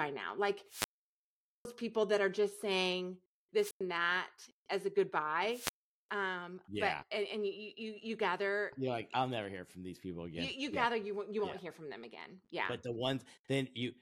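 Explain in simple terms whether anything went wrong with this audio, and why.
Three wireless microphone squelch dropouts occur: 0.66 to 1.67 s, before "people that are just"; 3.59 to 3.81 s, between "that are just saying" and "that as a"; and 5.48 to 6.09 s, after "that as a". Each time the radio signal fades, hiss rises, and the receiver mutes the sound. That hiss just before the silence sets it apart from a plain digital gap.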